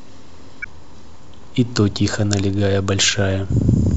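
Speech with damaged data in a compressed stream from 0.62 to 0.66 s: corrupted bytes make the decoder misread frames and lose sync until it finds the next valid header, producing a brief chirp, squawk, click or short hole.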